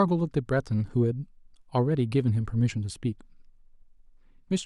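Nothing in this recording of speech stands out as a technical fault: the signal stays continuous and steady throughout, with no audible interruptions, level problems or distortion.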